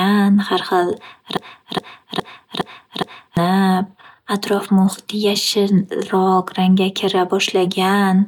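Speech that sticks in a broken-record loop from 1.37 to 3.37 s: a fragment of about 0.41 s replays exactly, back to back, five times, and the speech that belonged there never plays. A stalled player or stream likely kept resending its last buffered fragment.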